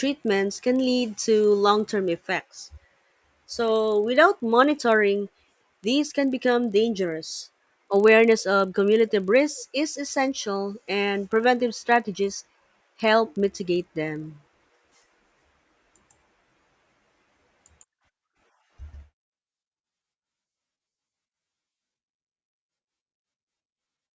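Speech resampled from 24 kHz to 16 kHz with the resampler restarted on every block, leaving a 25 Hz buzz from 40 ms block edges that, unlike mains hum, stops in silences.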